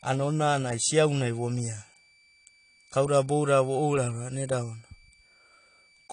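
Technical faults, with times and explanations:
Throughout, switching supply whistle: a steady high tone between 2.31 and 2.34 kHz, roughly 35 dB below the speech, from a power supply cycling audibly.
Throughout, AAC compression: plainly audible coding damage with nothing above 10.1 kHz, likely from low-bitrate AAC-LC, which fits about 32 kbps, lowering the cut-off.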